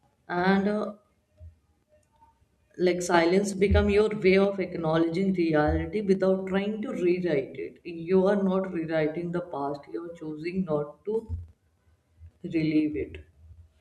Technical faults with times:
none

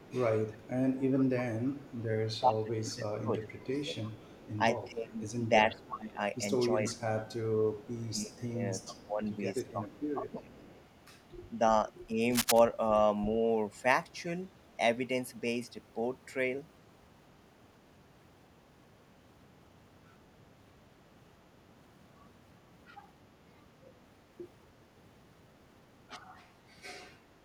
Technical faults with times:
0.00-2.39 echo leak
1.90-10.67 speech suppressed in double talk
4.03-5.82 echo leak
6.87-10.81 echo leak
12.30-12.59 cable scratch noise

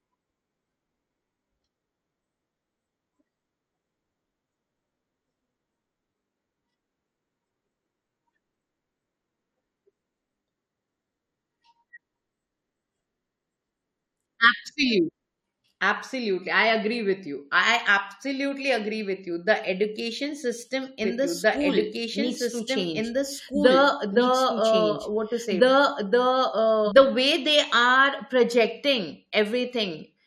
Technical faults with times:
21.04-26.92 doubled audio track
27.31 overlap between stream segments

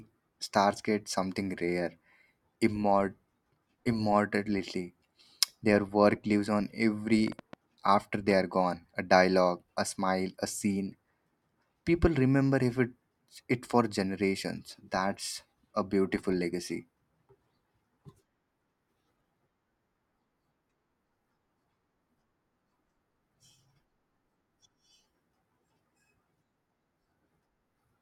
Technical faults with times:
7.28-8.32 train of clicks

